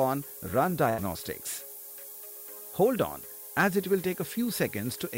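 Throughout, the signal is quantised to just 6 bits, with the rounding error shaped upward in frequency. That low bit depth with noise shaping leaves a steady, thin hiss, only around 10 dB below the signal, climbing sharply toward the top of the band.

From 0.89 to 1.00 s, a burst of packet loss interrupts the stream. For about 84 ms the receiver extends the last sound while fading it down. Playback then resumes about 80 ms further on, so that stretch of audio is missing.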